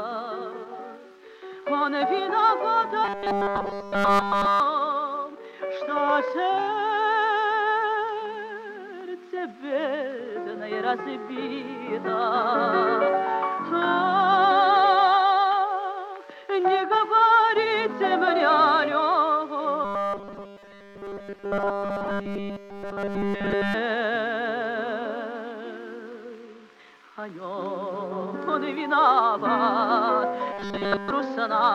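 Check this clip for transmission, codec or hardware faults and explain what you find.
Robotic sound from repeated short buffers occurs three times: 3.04 to 4.60 s, 19.85 to 23.74 s and 30.53 to 31.11 s. Audio was likely arriving too seldom, so playback looped a buffer of about 5 ms, discarding almost all fresh audio and forcing a rigid, metallic 200 Hz buzz over the sound.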